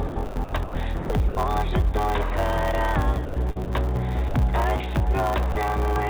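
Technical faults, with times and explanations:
Throughout: block size mismatch (truncated). One stage writes longer blocks than the next reads, so each block's tail is discarded. That leaves a steady 100 Hz buzz at the block rate, and the sound runs 1.07 times fast, which fits 512-sample writes. Unlike dropouts, the buzz never stops.
0.08 to 1.37 s and 3.25 to 3.70 s: sound chopped by the voice detector. Over each stretch the sender likely toggled its voice detector repeatedly, swapping about 630 ms and 232 ms of quiet sound for comfort noise. Each stretch has two or more holes, which sets this apart from a single clean gap.
4.29 s to 4.34 s and 5.52 s to 5.55 s: sound dropped by the voice detector. Each time, the detector likely took faint sound for background and stopped sending, so 50 ms and then 30 ms of audio give way to steady comfort noise. It is one switch-off and return, with no rapid flicker.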